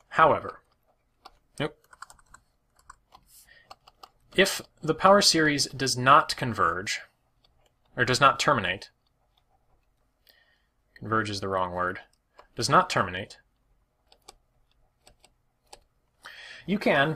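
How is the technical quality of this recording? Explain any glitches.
No glitches or technical faults.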